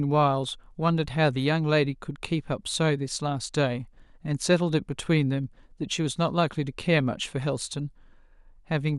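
A speech recording, with nothing technically wrong to be heard anywhere in it. No fault can be pointed to at any moment, so there are no times or causes to give.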